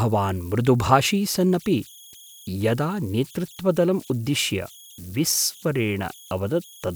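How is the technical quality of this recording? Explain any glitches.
The recording carries converter idle tones throughout the speech, with the error sitting about 26 dB below the signal. A delta-sigma converter running without dither settles into repeating bit patterns whenever its input is small, and those patterns produce a tone whose pitch follows the input's offset. Here it lands at around 3 kHz, heard as a whistle or chirp in the pauses and as a grainy texture beneath the quieter passages.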